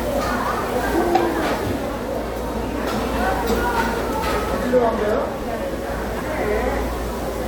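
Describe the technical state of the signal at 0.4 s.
At 0.4 s the signal is intact, with no audible fault at that moment.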